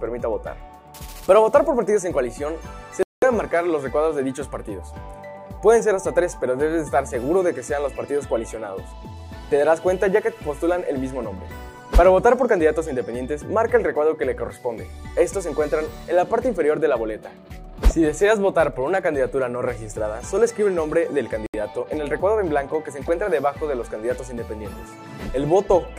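At 3.03 s the sound drops out completely for about 194 ms, then resumes at 3.24 s; a shorter gap of about 74 ms follows at 21.46 s, resuming at 21.55 s. Both are most likely a Bluetooth stall: wireless interference delayed packets, the headphones' buffer emptied, and playback halted until retransmissions arrived. On a waveform each appears as a flat line with hard edges; on a spectrogram, a clean vertical blank column across all frequencies.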